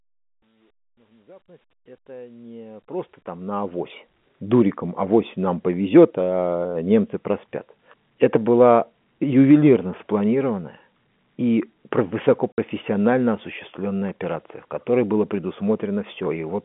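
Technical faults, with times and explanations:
12.52–12.58 s, packet loss filled with silence: the sound cuts to dead silence for 60 ms, which fits three lost 20 ms packets, and then resumes mid-stream. The receiver inserted zeros instead of concealing the gap, so both edges are abrupt. There are no repeated or smeared fragments of the kind concealment leaves, only a clean hole that is a whole multiple of the packet length.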